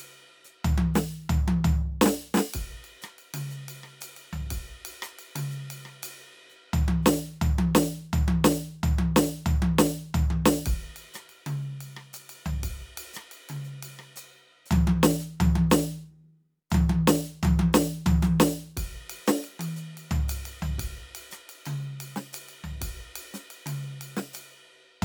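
A music recording with no audible technical faults.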